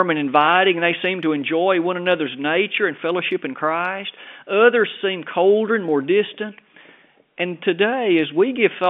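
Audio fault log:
No faults are heard in the speech. The G.711 telephone coding gives it the narrow sound of a phone line, with content confined to roughly 250 Hz to 3.5 kHz.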